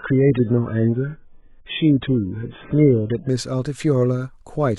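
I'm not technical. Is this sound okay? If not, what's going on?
No. An adaptive stream starting at a low bitrate affects 0 to 3.29 s. To start quickly, the player began with a rough, heavily squeezed version of the speech, with nothing above 3.8 kHz, so it sounds dull and smeared. At 3.29 s it switches to a clearer version without any gap.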